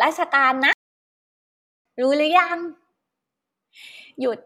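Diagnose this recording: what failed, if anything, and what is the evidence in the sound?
A playback stall hits this speech early on: the sound cuts to silence at 0.73 s and stays dead for about 1.12 s, resuming at 1.85 s. That points to the playback stage, most likely the player starving for data or its thread getting blocked until it caught up.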